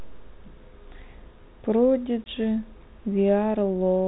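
At 2.24 s the speech drops out for about 20 ms, a hard-edged gap that ends at 2.27 s. That's packet loss on an ADPCM call, most likely a single lost packet. The gap gets filled with silence, and the decoder's adaptive predictor and step size lose track of the sender's. So when the sound comes back it has a bit of distortion, then settles over the next few tens of milliseconds. The G.726 coding at 32 kbit/s only adds light coding damage.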